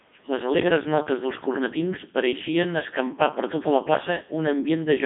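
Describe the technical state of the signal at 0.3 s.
At 0.3 s the speech is running through a Codec 2 vocoder, as it does for the whole clip. The sound is rebuilt from sine waves driven by pitch, voicing and envelope data, so it comes out robotic and buzzy, which fits the 3.2 kbit/s mode. A spectrogram shows combed, synthetic harmonics within 200 Hz to 3.6 kHz and nothing above 3.7 kHz.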